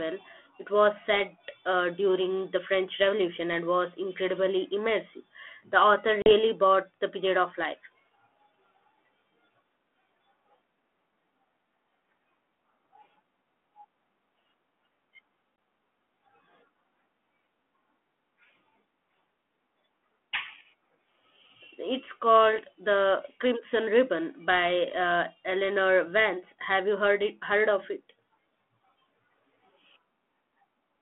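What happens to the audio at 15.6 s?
Packet loss on an ADPCM call leaves a hard-edged 20 ms silent hole, about one packet, at 15.56–15.58 s. Unlike a plain dropout, the desynchronised ADPCM decoder then briefly returns slightly distorted before settling.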